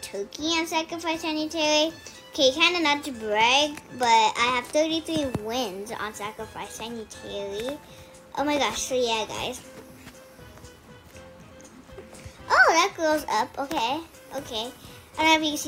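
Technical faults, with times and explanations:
No technical faults are audible.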